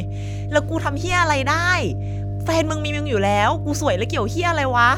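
A speech recording carrying mains hum from start to finish: a steady 50 Hz tone, loud enough to sit only a few decibels below the speech, from a ground loop or nearby transformer. A spectrogram shows an unbroken horizontal line at 50 Hz, and the waveform never returns to silence between phrases.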